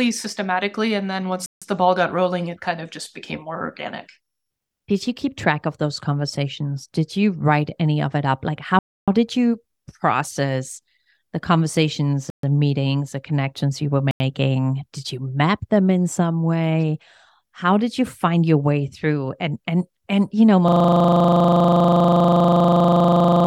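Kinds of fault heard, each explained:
Bluetooth stall: at 1.46, 8.79, 12.3 and 14.11 s the speech drops to dead silence for 156, 287, 133 and 90 ms, then carries on. These gaps are likely wireless dropouts: radio interference delayed packets, the receiver's small buffer emptied, and playback halted until retransmitted data arrived. The gaps are clean holes rather than smeared or distorted sound.
System hang loop: from 20.68 s to the end, the sound stops moving forward. One 40 ms slice repeats exactly, about 70 times, at 25 Hz. This happens when the computer or audio driver freezes while the sound hardware keeps reading the same ring buffer over and over. With a slice this short, the result is a rapid, mechanical rattle at 25 Hz that lasts until the clip ends.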